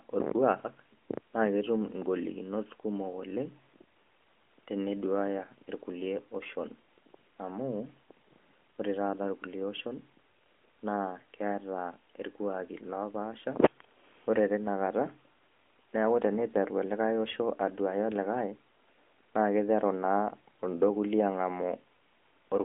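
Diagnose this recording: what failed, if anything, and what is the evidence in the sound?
Listening through the speech, nothing stood out that would point to a failure at any stage of the chain.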